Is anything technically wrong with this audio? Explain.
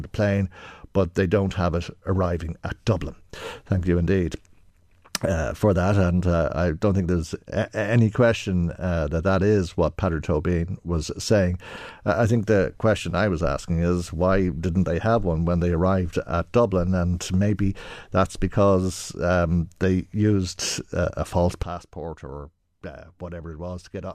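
Yes. At 21.63 s, right after "used uh a false", there is a sudden gain jump: the level was likely switched instantly without a ramp. Speech and background noise both drop by about 12 dB in one step and stay down to the end.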